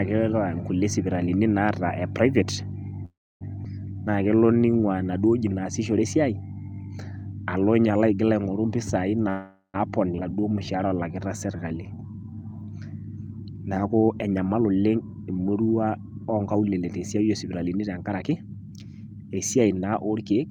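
At 3.05 to 3.43 s the speech stops and the last sound trails off into a fading buzz or hiss, then silence for about 290 ms. This is a call audio freeze, likely from delayed packets draining the jitter buffer. Speech resumes where it stopped, so nothing is lost. The same happens at 9.29 to 9.76 s, filling about 448 ms, with about 100 ms of silence.

Unlike a freeze, a skip ahead removes audio without leaving a gap. At 3.65 s roughly 150 ms of speech vanishes, and at 10.18 s roughly 400 ms, with the two sides butted almost directly together.

A jitter buffer slow-down follows each skip, at 3.94 to 4.78 s (84% speed, 141 ms added) and 10.31 to 12.66 s (85% speed, 370 ms added). Repeated pitch periods rebuild the buffer, so speech drags with stretched sounds but keeps its pitch.

The opposite, a jitter buffer speed-up, runs at 113% from 13.89 to 15.47 s and 16.41 to 19.31 s. Short pitch-period pieces are cut, roughly 200 ms and 400 ms in total, so speech sounds hurried at unchanged pitch.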